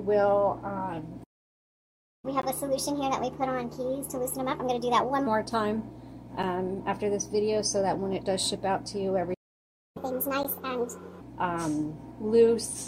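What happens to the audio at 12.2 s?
Nothing goes wrong at 12.2 s; the audio plays through that moment intact, with no dropout, click, glitch or other fault.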